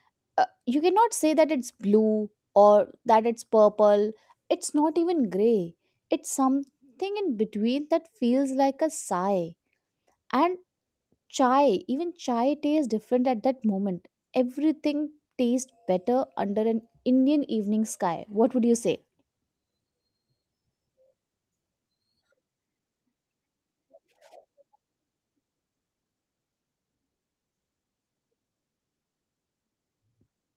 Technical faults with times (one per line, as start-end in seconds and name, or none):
none